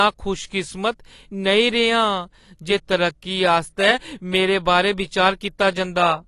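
The speech has likely passed through AAC compression, AAC-LC at a low bitrate, which fits something around 32 kbps. With so few bits per frame, the encoder discards the top of the spectrum and quantises the rest coarsely. Throughout the clip nothing is present above 12 kHz, so the speech sounds dull and closed-in, and the coding damage is plainly audible as a smeared texture, warbling on sustained sounds and sibilants.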